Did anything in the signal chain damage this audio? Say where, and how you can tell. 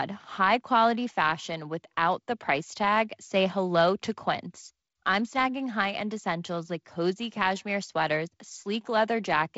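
No, nothing damaged this audio.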